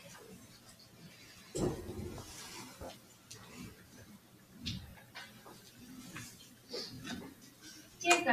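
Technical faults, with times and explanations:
throughout: noise suppressor applied to music or sounds. A speech-tuned suppressor treats steady, held material as noise, so level swings by roughly 10 dB as sustained parts sink and attacks pass. This gives a pumping, thinned texture across the clip rather than isolated dips.
0.54–1.01 s, 2.99–3.30 s, 4.18–4.53 s, 6.53–6.69 s, 7.35–7.63 s: sound cut by the noise suppressor. Each stretch of sustained or decaying sound drops by about 5 dB, about 6 dB at 4.18 s, for 150 to 400 ms. Unlike a dropout, sound stays present but recedes.
6.95 s: overlapping chunks. At a processing join, about 23 ms of audio plays twice, heard as a brief stutter or click. The joins are consistent with 1 s chunks. The doubled material marks it out from a suppressor dip, which lowers level without repeating anything.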